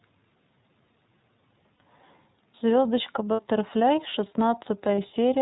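The iLBC codec runs through the whole clip. The speech is cut off above 4 kHz, giving it a narrowband telephone quality, and the coding damage is plainly audible as a rough, slightly synthetic texture. Each frame's excitation is coded on its own, and the character of the sound fits iLBC's 30 ms frame mode at about 13.3 kbps.

Lost iLBC frames occur at 1.74 to 1.82 s and 3.33 to 3.40 s, each about 60 ms long, and again at 4.95 to 4.98 s, about 30 ms. In each gap the decoder repeats the last pitch cycle mixed with noise, so the speech briefly turns into a held, slightly buzzy or breathy vowel. Because iLBC frames stand alone, normal speech returns almost immediately after each gap.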